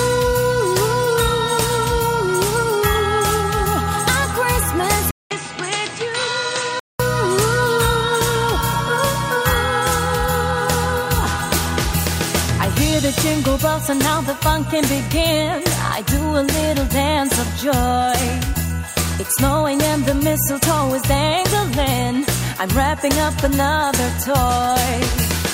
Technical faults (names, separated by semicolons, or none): input switched to a poorer device